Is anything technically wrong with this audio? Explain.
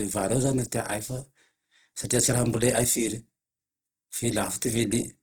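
Yes. Opus compression, throughout: starved bands are likely refilled with folded or noisy content by Opus's CELT mode, making the speech sound rough and grainy, which fits about 16 kbps.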